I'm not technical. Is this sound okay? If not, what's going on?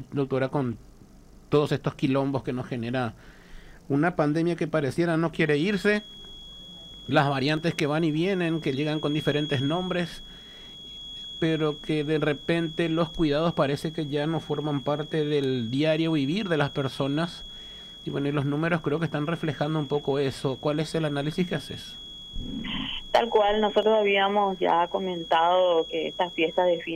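No. From 5.39 s to the end there is a feedback whistle, a thin, steady high tone near 3.3 kHz sitting well below the main sound and swelling and fading slowly in level. It is likely a loudspeaker feeding back into the microphone, held just short of howling.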